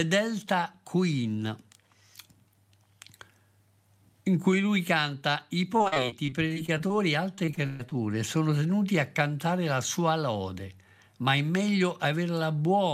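Repeated packet loss (robotic sound) runs from 5.77 to 6.92 s, after "cui lui canta I", and again from 7.36 to 7.93 s, before "sono tenuti a cantare". The lost stretches are patched by repeating the preceding sound, so the speech turns choppy, with pieces missing. A spectrogram shows smeared, frozen harmonic bands broken by brief holes, and the second burst has one dropout of about 124 ms.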